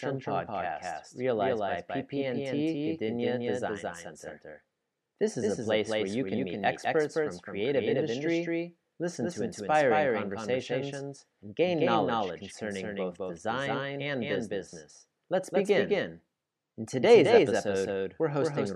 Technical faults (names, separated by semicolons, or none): doubled audio track